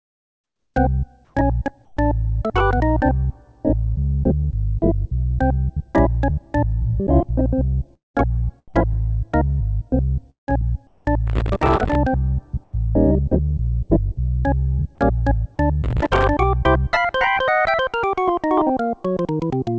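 From 0.0 to 0.74 s, and again at 1.25–1.34 s and 1.85–1.97 s, the background turns into a smooth, featureless hiss, about 11 dB quieter at the start and about 1 dB and 7 dB quieter in the later gaps. This is comfort noise in place of the background. The sender likely stopped transmitting during pauses, so the receiver filled them with synthetic noise.

At 7.94–8.17 s the sound smears into a fading buzz and then drops to silence for about 0.16 s before resuming with a piece missing. This is a long network dropout. Roughly 210 ms of audio likely never arrived, and the receiver stretched the last sound to cover it.

A second dropout at 10.3–10.62 s loses about 180 ms and leaves about 0.14 s of silence. Comfort noise then fills the background until 11.05 s.

From 11.27 to 11.95 s a gritty crackle tears across the sound. This is processor overload crackle. The processor missed a long run of buffer deadlines, and each miss left a tiny silent hole, with spacing that fits buffers of around 1.5 ms.

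At 12.64–12.73 s comfort noise returns, about 6 dB quieter than the real background.

The crackle comes back at 15.84–16.27 s, a shorter burst with the same tiny silent gaps.

Throughout, the G.722 call path leaves nothing above 8 kHz.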